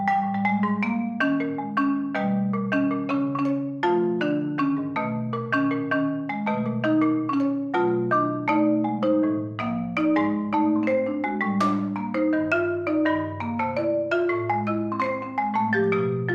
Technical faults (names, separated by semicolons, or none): none